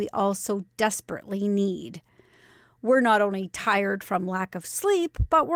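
A speech recording with no technical faults to report.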